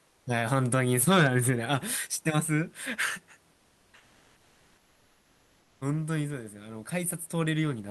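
From 0.07 to 0.25 s and again from 3.53 to 5.81 s, comfort noise replaces the real background: the room noise gives way to a flat, featureless hiss, about 2 dB quieter at first and about 5 dB quieter later, likely from discontinuous transmission such as Opus DTX.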